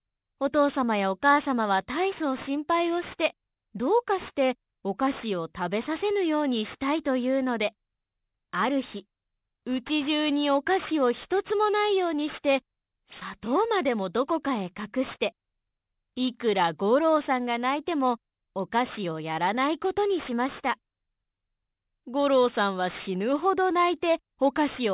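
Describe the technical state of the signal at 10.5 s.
At 10.5 s the signal shows aliasing, and it runs unchanged through the whole clip. The audio was taken down to a lower sample rate without an anti-aliasing filter, in a way that points to a drop from 44.1 kHz to 8 kHz. Everything above the 4 kHz fold point was mirrored back into the band, landing at unrelated frequencies roughly 20 dB under the signal. Sibilant and bright content turns gritty and metallic. On a spectrogram, energy runs hard up to a sharp 4 kHz ceiling, with folded components tracing mirror-image paths below it.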